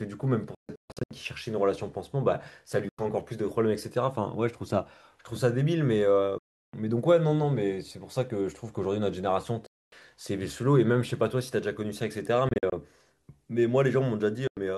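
From 0.55 to 1.11 s the speech breaks into a scatter of abrupt silent gaps, about 418 ms lost in all with the longest single gap 139 ms. When the sound returns, it picks up as if it had kept playing. This is likely a Bluetooth dropout, with packets failing to reach the headphones in time. The same clean-edged holes recur at 2.89 to 2.99 s (93 ms), 6.38 to 6.74 s (348 ms) and 9.66 to 9.92 s (255 ms).

At 12.25 s a sharp snap sits on top of the speech, likely an electrical switching spike, a brief arc from a nearby switch or discharge coupling into the audio line.

Dropouts follow at 12.49 to 12.72 s, scattered with 116 ms lost and the longest gap 46 ms, and at 14.47 to 14.57 s (93 ms).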